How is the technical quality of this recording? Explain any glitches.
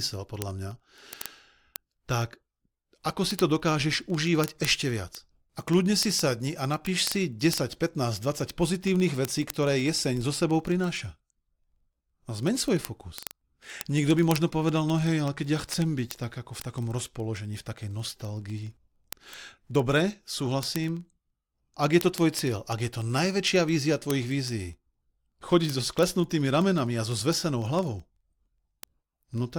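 The recording is marred by one continuous fault: word clock ticks from 0.13 s to 29.55 s. The receiving device runs on its own clock, roughly 500 ppm away from the sender's, so the two drift apart and slip about every 40 ms, dropping or repeating a single sample each time. That yields hundreds of sharp ticks at a steady rate of around 25 per second, varying in strength, running under the speech throughout.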